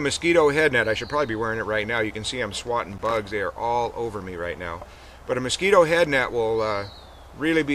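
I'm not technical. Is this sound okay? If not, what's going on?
No. Loose connector crackle appears from 2.92 to 3.17 s, a quarter-second burst of scratchy crackling. A worn or dirty plug contact is briefly losing and regaining its connection, so the sound keeps cutting in and out.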